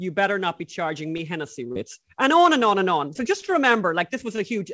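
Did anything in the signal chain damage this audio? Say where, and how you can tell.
Yes. Four times the sound briefly hangs, as if a syllable were held a touch too long with a faint buzz: at 1.17 to 1.21 s, right after "better not be charging"; at 1.67 to 1.72 s; at 3.41 to 3.44 s; and at 4.36 to 4.40 s. These are short stalls from a late packet at the network and jitter-buffer stage. The buffer ran dry, the receiver stretched the last sound for about 15 to 33 ms, then resumed where it left off, so nothing is lost but the timing stutters.

Three other spots smear or wobble instead: 1.72 to 1.77 s (directly after the second stall), 3.13 to 3.17 s just after "and on and on", and 3.46 to 3.50 s. Each is a short concealed packet loss in the network path. About 20 ms of audio never reached the decoder, and the receiver filled each gap by extending the preceding sound before blending back into the genuine signal.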